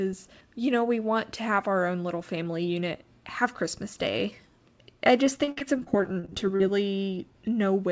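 From 5.44 to 6.62 s, after "I just", repeated packet loss (robotic sound) leaves patched gaps up to 49 ms: choppy stutter, not one dropout.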